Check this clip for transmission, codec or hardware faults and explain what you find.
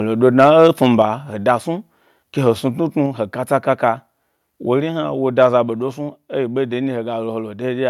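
Two faults are audible: microphone overload in two places, and one microphone volume step down.

Microphone overload occurs from 0.39 to 0.84 s, before "he da snu ke", and from 5.42 to 5.45 s, after "hna wo". The likely cause is input gain pushing peaks past the converter limit, by about 4 dB and about 0 dB respectively. Roughly one percent of samples are flattened, giving a harsh crackle. On the waveform the peaks are squared off, and the spectrogram shows smeared high-frequency splatter.

The microphone volume steps down at 1.02 s, just before "he da snu ke". It is likely automatic gain control reacting to the clipping. Voice and background both drop by about 4 dB at once, and the waveform envelope shrinks abruptly there.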